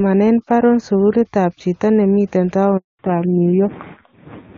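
At 2.77 s a handover gap cuts the speech to silence for 220 ms, until 2.99 s. It is a clean dropout while the call switches networks, not a choppy packet-loss stutter. From 2.99 s onward, fallback to narrowband removes everything above 4 kHz. The earlier HD Voice brightness turns dull and raspy, which fits a low-rate AMR narrowband codec near 5.9 kbit/s rather than simple filtering.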